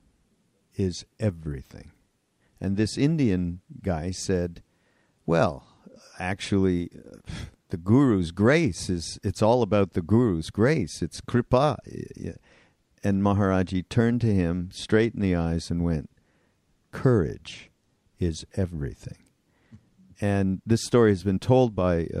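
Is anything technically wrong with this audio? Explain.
No, nothing technically wrong turns up anywhere in this speech recording, so there's nothing to flag.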